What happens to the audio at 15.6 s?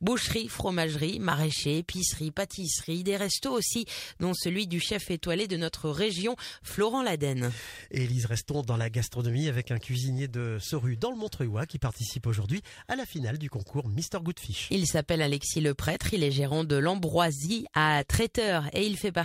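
Nothing goes wrong at 15.6 s; the audio plays through that moment intact, with no dropout, click or distortion.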